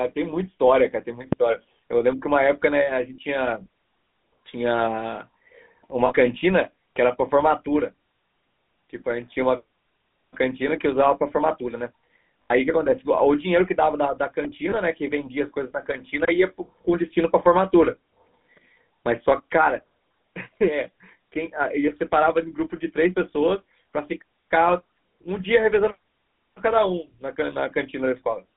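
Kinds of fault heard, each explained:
GSM full-rate codec: buzzy, gravelly roughness on the speech throughout, band-limited to roughly 150 Hz to 3.6 kHz, from vocal-tract modelling driven by sparse regular pulses at 13 kbps.
phantom power thump: a deep thump at 1.33 s dying away over about 80 ms, as a supply switching on a live input pushes a step through the coupling capacitors.
lost GSM frames: brief rough, metallic rings at 6.06 s, 12.42 s and 14.70 s, lasting 40, 80 and 20 ms, where missing frames were filled by repeating the last good one.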